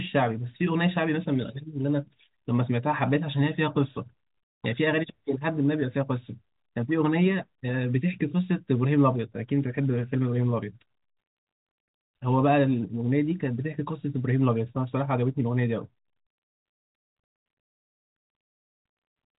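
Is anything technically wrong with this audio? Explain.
No, nothing is technically wrong.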